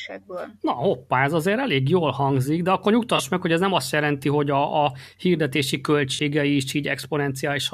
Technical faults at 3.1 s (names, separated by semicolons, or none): corrupt frame concealed